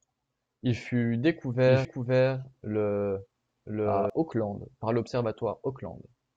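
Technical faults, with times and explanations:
1.66 to 4.10 s: doubled audio track. A second full-band copy of the speech runs about a second behind the original at roughly equal level, with no decay or room colour, and it cuts in and out abruptly at both ends. This likely comes from a slower parallel capture path or an edit that left two misaligned copies.
1.85 s: CD skip. A very short mute, a few milliseconds long, gives a tick, and playback resumes from a different point on the disc spiral. The laser has jumped tracks after a knock or a surface flaw, so the speech jumps instead of continuing.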